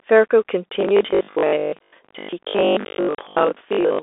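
The whole clip passes through a Bluetooth CVSD headset codec. The one-bit delta modulation suggests a 64 kbps link, and the line band runs from about 300 Hz to 3.6 kHz, with nothing above 3.8 kHz. The adaptive step cannot keep up with fast, loud high-frequency movement, so the damage is plainly audible. The speech sounds boxy and telephone-thin, its sibilants come out scratchy, and a grainy hiss sits beneath it.

From 0.81 s to the end at 4.03 s, the sound turns robotic, likely because new audio was arriving too slowly and the playback kept repeating a short buffer to fill the gaps. The repeats impose a steady 50 Hz buzz, which fits a 20 ms buffer. Most of the stretch is this recycled material rather than fresh audio, so the speech becomes a rigid, metallic drone that only loosely follows the original.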